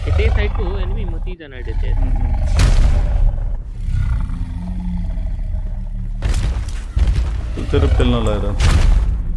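No technical faults can be heard anywhere in the audio.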